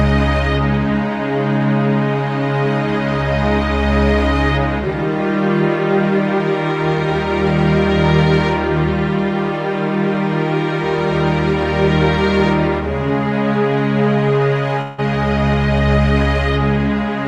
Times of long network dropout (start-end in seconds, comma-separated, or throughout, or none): 14.81-15.02